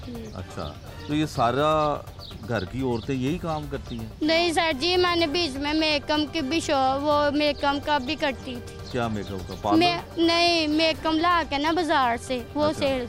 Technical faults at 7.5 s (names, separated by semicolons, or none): none